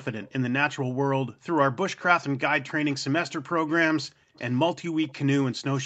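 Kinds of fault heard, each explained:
Background gated by the echo canceller: while the far end was playing, the echo canceller clamped the microphone hard, so the room sound drops out at 0.19–0.33, 0.8–1.46, 4.02–4.36 and 4.82–4.91 s, by about 20 to 40 dB, recovering as the canceller releases.
Echo leak: faint delayed scraps of speech, about 20 to 30 dB below the main voice and trailing by 277 ms, appear briefly at 1.99, 2.92, 4.36 and 5.02 s, likely residual loudspeaker pickup that the echo canceller failed to remove.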